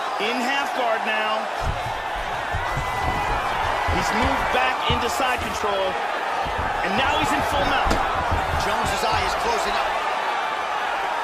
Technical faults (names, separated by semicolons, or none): none